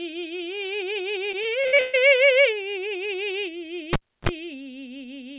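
A music recording carried over a call link, band-limited to nothing above 4 kHz, which fits a 64 kbps G.711 A-law codec, carries two faults. From 1.32 to 2.09 s there is repeated packet loss (robotic sound). The network drops or delays audio seven times in quick succession, and the receiver fills each hole by stretching the last good fragment. About 39% of that span is patched rather than real, with the longest gap 130 ms, so the music turns choppy with pieces missing. From 3.93 to 4.29 s a cable is pulled and plugged in. The live connection breaks with a pop and the signal drops to near silence for about 310 ms. As the plug goes back in, a roughly 40 ms burst of 50 Hz mains buzz leaks through while only the tip makes contact, and a second pop marks the sound's return.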